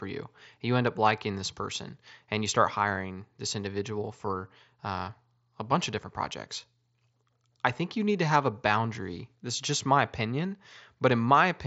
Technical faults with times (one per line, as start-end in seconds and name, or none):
none